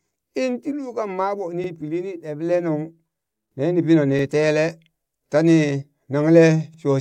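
At 1.64–1.69 s, 4.19–4.24 s and 6.74–6.79 s, the speech stutters as overlapping chunks replay 50 ms at each join. The joins fall every 2.5 s. Unlike a dropout, nothing is lost. A short slice plays twice.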